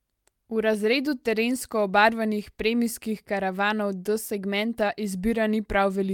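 No technical faults can be heard anywhere in this speech recording.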